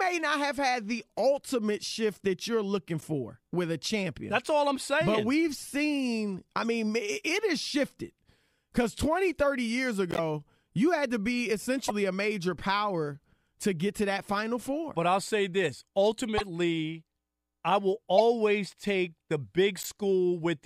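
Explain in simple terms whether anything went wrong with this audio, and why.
Corrupt frames were decoded, causing brief chirps or blips at 3.0, 6.61, 10.11, 11.83, 16.37, 18.18 and 19.82 seconds. Damaged bits made the player misplace sound for a split second. The first two are faint. The later ones are louder.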